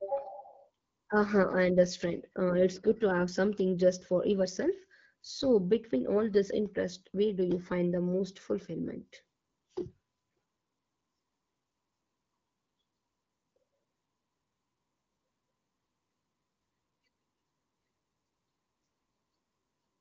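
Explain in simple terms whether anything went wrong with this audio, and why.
Nothing went wrong with this recording. The speech has gone through the AMR wideband (HD Voice) phone codec, which leaves it clear, with the top of the sound range slightly thinned the way a good mobile call is.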